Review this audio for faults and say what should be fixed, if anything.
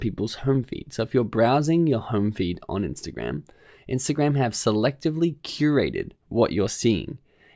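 Nothing here needs fixing, as no faults turn up anywhere in the recording.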